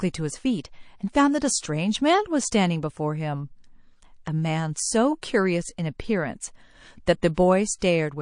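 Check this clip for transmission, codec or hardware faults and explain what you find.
Two faults are present: codec damage throughout the speech, and three pre-echo events.

MP3 compression runs the whole clip: dulled treble and watery, swirling artefacts on sibilants, likely from heavy MP3 encoding at a low bitrate, which fits roughly 40 kbps.

Pre-echo occurs at 4.74 s (22 ms), 7.34 s and 7.79 s (34 ms each): the encoder stayed in long blocks, so attack noise leaks ahead, producing a brief hiss about 15 to 22 dB up.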